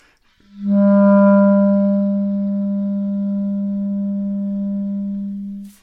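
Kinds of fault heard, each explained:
Nothing stood out as a technical problem when listening to the sound in this clip.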